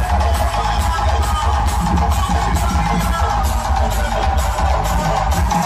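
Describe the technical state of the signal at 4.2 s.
At 4.2 s the signal sits inside a drift correction step running from 3.40 to 5.38 s. Playback is about 5.55% slow and pitch falls by roughly 99 cents, close to a full semitone, with speed and pitch moving together. This is likely a clock-matching routine retiming playback to rebalance its buffer. Unlike wow or flutter, the offset holds steady rather than wavering.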